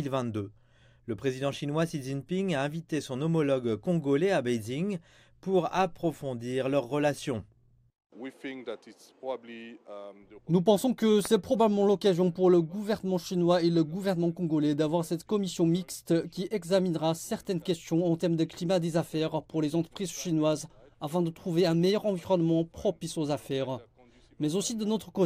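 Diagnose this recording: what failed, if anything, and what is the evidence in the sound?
A single loud pop sits at 11.25 to 11.27 s. It is one sharp transient, roughly 10 dB above the surrounding sound. The sound continues underneath without a break. The fault most likely sits in the analogue wiring, with a plug, switch or static discharge putting a sudden voltage step onto the line. The following circuits shaped that step into a brief pulse, heard as a pop laid over the audio.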